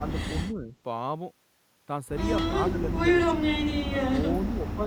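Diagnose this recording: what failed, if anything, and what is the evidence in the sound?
Call processing: the speech dips by about 5 to 20 dB at 0.0–0.15, 0.5–0.73, 2.48–2.52, 2.7–3.0, 3.37–3.43, 3.89–4.05 and 4.5–4.86 s. This is likely speech suppressed in double talk, with the echo canceller turning it down while the far end also spoke. Packet loss would cut to silence, but here the level drops and the speech stays present.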